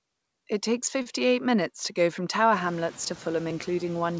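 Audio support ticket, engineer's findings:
Short stall from a late packet, 1.02 to 1.08 s, just before "minutes to go from". Sound held about 37 ms, then resumes where it left off, with nothing lost. Jitter buffer ran dry and the receiver stretched the last frames; playout delay grew by about 37 ms. Spectrogram: harmonics frozen flat, slightly smeared. Waveform: repeating near-identical cycles with a faint dip. The band stops at 8 kHz, consistent with a wideband call codec such as G.722. Room noise rises about 18 dB near 2.5 s.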